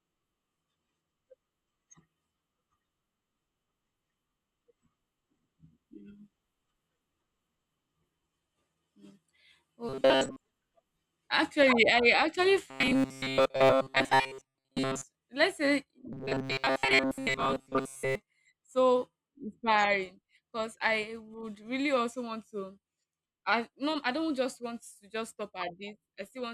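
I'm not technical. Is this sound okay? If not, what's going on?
No. From 9.89 to 10.39 s, 12.70 to 15.04 s and 16.13 to 18.15 s there's robotic sound from repeated short buffers. New audio likely arrived too slowly, so tiny slices were replayed most of the time. The speech becomes a rigid, metallic buzz at 133 Hz.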